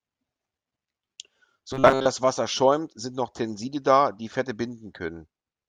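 From 1.71 to 2.07 s the speech turns into a rigid, metallic robotic buzz at 133 Hz, likely from repeated short buffers, each loop about 7.5 ms. Most of the real audio in that stretch is skipped. Unlike a dropout or stutter, the sound never goes silent or jumps back.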